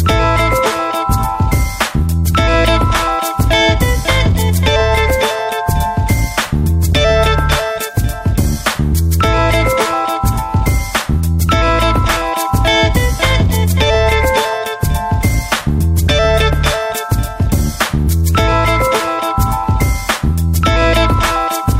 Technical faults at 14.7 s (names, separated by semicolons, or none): none